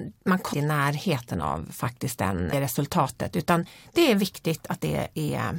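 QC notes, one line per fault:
2.52 s, damaged data in a compressed stream: a brief glitch right after "faktiskt den" and just before "resultatet utan". Some of the compressed data at this point was lost or overwritten, so the decoder could not read those frames correctly, lost its place in the stream, and resumed at the next frame header.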